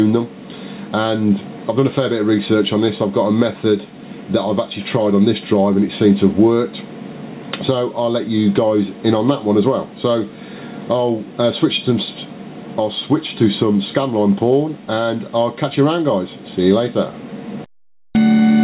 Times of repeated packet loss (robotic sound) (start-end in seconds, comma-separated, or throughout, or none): none